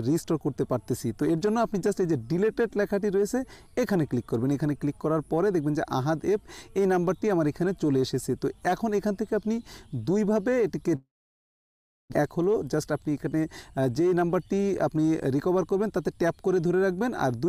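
A long network dropout, likely from packets that stopped arriving, begins at 10.95 s. Playback trails off into a fading buzz or hiss, then about a second of near-silence, and the sound returns at 12.14 s with roughly a second of audio gone.

A jitter buffer speed-up follows from 12.22 s to 14.30 s. Audio piled up after the gap, so the receiver trims short pitch-period slices repeatedly, playing at 107% speed. The sound hurries along at unchanged pitch until around 150 ms of backlog is cleared.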